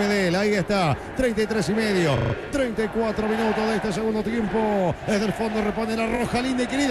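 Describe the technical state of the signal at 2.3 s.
At 2.3 s the signal is inside a run of repeated frames lasting from 2.17 to 2.33 s. A 40 ms block of compressed audio, probably two frames, plays four extra times, adding 160 ms and a stutter. A spectrogram shows identical 40 ms tiles.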